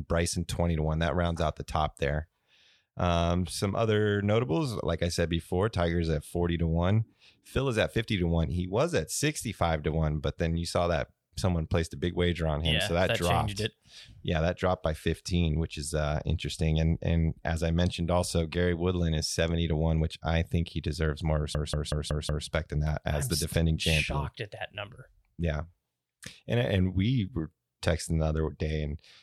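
At 21.55 s, right after "think he deserves more", the speech locks into a system hang loop until 22.48 s, just before "than that as I'm". The playback side stalled while the output hardware kept replaying one stretch of its buffer: a 186 ms slice repeats exactly five times at about 5.4 Hz, giving a machine-gun stutter. That loop length fits an 8192-sample buffer, and essentially no audio is lost once playback resumes.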